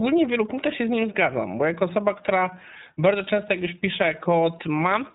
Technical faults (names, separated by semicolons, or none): iLBC codec